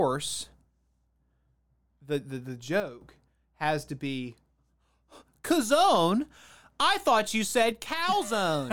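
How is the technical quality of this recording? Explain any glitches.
The recording has two level faults, both a sudden gain jump. At 2.8 s the level drops by about 10 dB and returns at 3.01 s. At 7.72 s it drops by about 4 dB and stays down to the end. Speech and background noise fall together with no fade, which points to the digital gain likely being changed from one sample to the next, as when a setting or bit shift is applied without a ramp.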